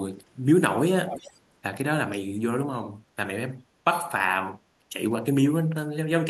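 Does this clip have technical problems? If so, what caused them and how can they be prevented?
Yes. From 1.06 to 1.38 s, a faint copy of the speech returns about 0.35 s late and roughly 10 dB quieter. This echo leak likely comes from a loudspeaker whose echo canceller let its microphone pickup through. A spectrogram shows a weaker, shifted repeat of the earlier speech pattern, and the waveform shows a smaller trailing burst. Headsets or a better-tuned echo canceller on the loudspeaker side would prevent it.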